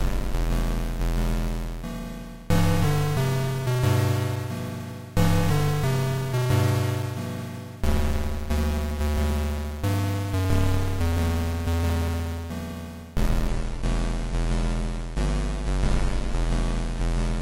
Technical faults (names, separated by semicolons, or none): adaptive stream at a lower bitrate